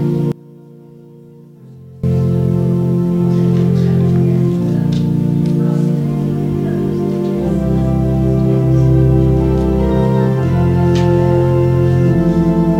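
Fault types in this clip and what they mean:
One channel inverted: From 0.32 to 2.04 s the sound drops by about 23 dB, leaving only a faint residue before full level returns. The likely cause is reversed polarity on one stereo channel, so when the two channels are summed to mono, everything they share cancels. What survives is only the small difference between them, which is why so little remains during that stretch.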